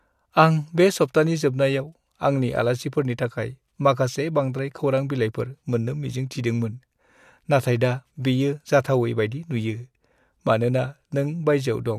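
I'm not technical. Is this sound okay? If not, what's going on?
Yes, this recording sounds fine, with no technical problems to hear anywhere in it. Nothing in the sound needs fixing.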